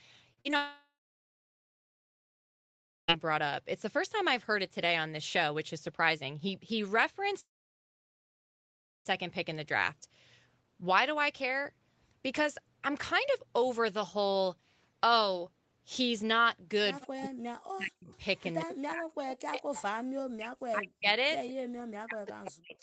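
At 0.33, 0.41 and 0.51 s, three short concealed packet losses leave gaps of about 40, 40 and 20 ms. The decoder bridges each by extending the preceding sound and then blending back. The result is a quick smear or wobble in the speech rather than a clean gap.

From 0.56 to 3.1 s, and again from 7.4 to 9.07 s, the audio drops out for about 2.5 s and then about 1.7 s. Each gap opens with a brief fading continuation and then settles into silence for most of its length. Speech resumes later with the missing portion simply gone, which points to a likely long network dropout.

From 17.06 s to the end, the talker's speech dips and breaks up in pieces, falling by roughly 40 dB at its deepest. This is likely speech suppressed in double talk. While the far side is active, the echo canceller cannot separate the two and attenuates everything.

Around that stretch, echo leak appears at 17.01–17.27, 18.12–18.75, 19.33–19.83 and 21.11–21.54 s. 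A copy of the speech returns about 180 ms late, between roughly 15 and 25 dB below the direct signal. The likely cause is residual loudspeaker pickup that the canceller failed to remove. All of this sits within an 8 kHz audio bandwidth, consistent with Opus at around 24 kbps.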